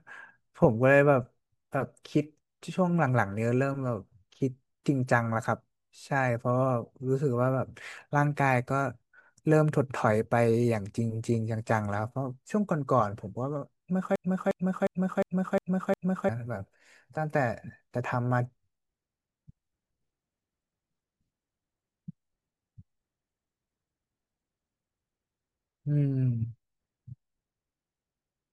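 Speech with a broken-record loop from 14.16 to 16.29 s: a 356 ms fragment repeats exactly six times back to back, replacing the audio that belonged there, likely a stalled player or stream resending its last buffer. On a spectrogram or waveform, identical blocks recur every 0.36 s.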